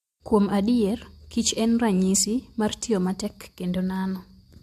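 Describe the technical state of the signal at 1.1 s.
At 1.1 s the signal is intact, with no audible fault at that point.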